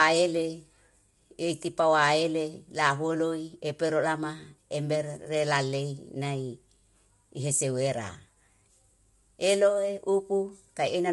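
Speech, with plainly audible low-delay AAC compression throughout. It sounds rough and grainy, with noise between harmonics, and a spectrogram shows smeared harmonic lines under a hard ceiling at 11.6 kHz. This is likely AAC-ELD, consistent with about 32 kbps.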